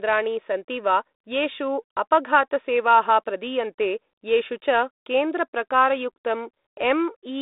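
The speech arrives over a G.726 ADPCM telephone path at 32 kbit/s, confined to a band of about 250 Hz to 3.7 kHz with nothing above 3.8 kHz, and apart from the light coding texture that rate leaves on the sound there is no fault to report.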